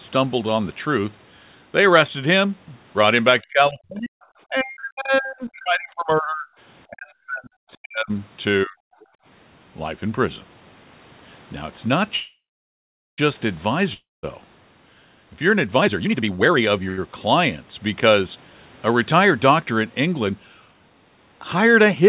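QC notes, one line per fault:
3.42–4.19, 4.48–6.48, 6.89–8.11, 8.65–8.97 s, speech suppressed in double talk: the talker sinks by about 40 dB in stretches, likely an echo canceller ducking everything while both sides spoke.
9.01–9.05 s, other side's voice leaking through: a brief faint scrap of a second voice, about 35 dB below the talker, likely residual loudspeaker echo the canceller missed.
12.16–13.20 s, call audio freeze: the last sound smears into a fading buzz, then about 0.8 s of silence. Audio resumes where it stopped, likely after delayed packets emptied the jitter buffer.
13.94–14.25 s, long network dropout: a short fading fill, then silence. About 0.3 s of audio is skipped on return, likely because packets were lost outright.
15.78–16.81 s, jitter buffer speed-up: audio runs at 172% speed with pitch unchanged, sounding hurried as roughly 0.7 s is trimmed out in small pitch-period cuts.
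16.89–16.99 s, short stall from a late packet: the sound is held 85 ms too long with a slight buzz or dip, then continues with nothing lost.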